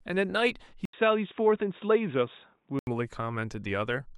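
Speech dulls from 0.85 to 2.87 s, empty above 3.8 kHz on a spectrogram after an 80 ms gap, likely input switched to a poorer device.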